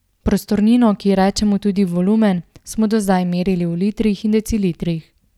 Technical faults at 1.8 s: none

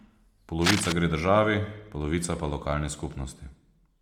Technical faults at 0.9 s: Bluetooth LC3 compression; cable scratch noise

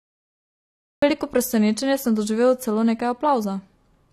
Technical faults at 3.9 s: AAC compression

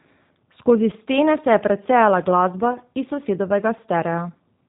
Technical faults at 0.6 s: G.729 codec

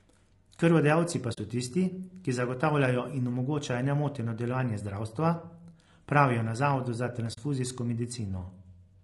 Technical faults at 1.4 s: low-delay AAC compression; AAC frame loss with muting

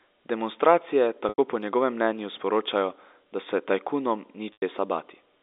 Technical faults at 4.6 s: packet loss with pitch repetition

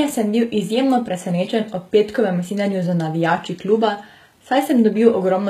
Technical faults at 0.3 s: HE-AAC compression

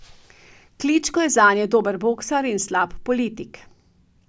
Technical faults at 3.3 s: none

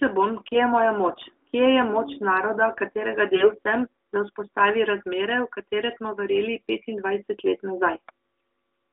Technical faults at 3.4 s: AMR bit errors

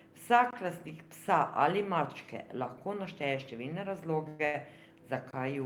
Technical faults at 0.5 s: block of digital silence

